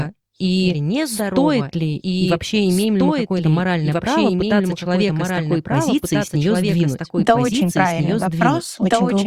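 From start to finish, the speech is heard twice. A second full-band copy trails about one and a half seconds behind, a few decibels quieter. It has no reverb tail or room colour. This doubled audio track likely comes from a second, slower capture path.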